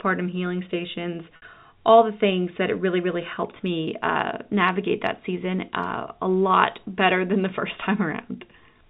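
Packet loss with pitch repetition hits this speech clip at 1.36 to 1.42 s, between "healing stations" and "all the things that": about 60 ms of audio, which fits three 20 ms packets, went missing and the receiver bridged it by looping the last pitch period, so the sound briefly holds on a buzzy tone before continuing, all over a telephone-band G.711 path.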